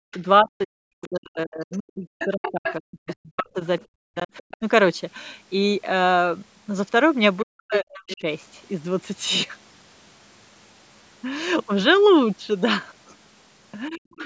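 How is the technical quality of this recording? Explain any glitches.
The recording has clear echo-control trouble from a call. The talker gets ducked while someone else talks, and the far side bleeds into the microphone.

Speech suppressed in double talk happens from 0.0 to 4.62 s, in pieces totalling about three seconds, then at 7.43–8.24 s and 13.89–14.21 s. The talker's voice drops sharply, at worst by around 40 dB, or cuts out. The likely cause is an echo canceller that cannot separate the talker from loudspeaker echo and turns both down.

The other side's voice leaks through at 0.12–0.19 s, 1.72–3.15 s, 3.79–4.57 s and 7.39–8.17 s. A second voice plays from the talker's loudspeaker and is not fully cancelled, likely by the same canceller. It is faint at first, then nearly as loud as the talker at 1.72 s and 7.39 s.

The call's microphone processing removes the deepest bass, and nothing is heard above 8 kHz.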